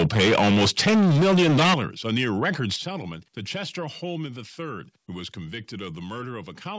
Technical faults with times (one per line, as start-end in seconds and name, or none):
0.00-1.76 microphone overload
1.74 microphone volume stepped down
2.16-2.47 microphone overload
2.76 microphone volume stepped down